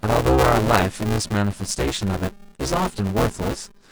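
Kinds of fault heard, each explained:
Buffer tearing: the writing and reading positions in the playback ring buffer have drifted into each other, so within every period a share of the audio, roughly two fifths, is stale sound from about ten milliseconds earlier, spliced in with hard joins. Through the whole speech clip this gives a steady robotic buzz at 200 Hz, the buffer rate. It stays while speech is present and falls silent in pauses, unlike underrun dropouts, which leave gaps of silence.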